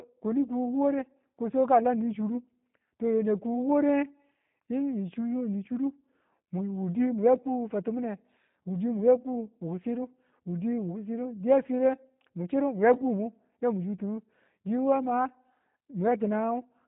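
From start to end, the speech carries G.729 codec damage. Nothing above 4 kHz survives. The rough, synthetic texture fits an 8 kbit/s G.729A link.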